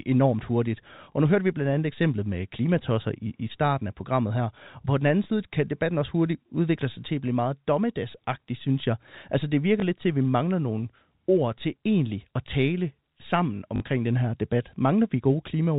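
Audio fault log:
1.12, 5.24–5.26, 9.80–9.82 and 13.76–13.80 s: packet loss with last packet repeated. Each time the last piece is played again. The first three gaps are 20 ms, after "enormt hurtigt", between "på den anden" and "kan debatten også hurtigt", and before "lidt til at vi". The last is 40 ms. The 40 ms run gives a short buzz near 50 Hz. All of this sits inside the narrow telephone band of the G.711 coding.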